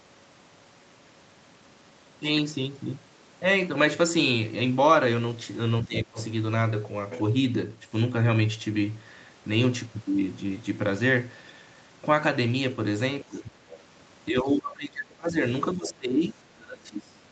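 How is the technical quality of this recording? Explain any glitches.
The speech has two recurring call-processing faults, both clustered around moments where a second talker overlaps. The audio carries nothing above 8 kHz, which fits a wideband Opus call path.

Speech suppressed in double talk occurs at 5.84–6.18 s, 13.25–13.57 s, 14.3–15.36 s and 15.74–17.19 s. Affected stretches run from about 0.3 s to 1.5 s, with dips of roughly 15 to 25 dB. The likely cause is an echo canceller that could not tell the near talker from loudspeaker echo and turned everything down. The voice sinks, dulls and breaks into fragments. On a waveform the envelope collapses. On a spectrogram the harmonics fade or vanish in patches, with the upper bands going first.

The other side's voice leaking through appears as short scraps at 5.97–6.02 s, 6.19–6.24 s, 13.35–13.40 s and 13.69–13.83 s. Each lasts about 50 to 140 ms and sits roughly 15 to 30 dB below the main speech. 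This is likely residual far-end audio that the echo canceller failed to remove from the microphone signal. It sounds like a faint second voice. A spectrogram shows brief, weak harmonic traces unrelated to the main talker's pitch, often tucked into or right beside the suppression gaps.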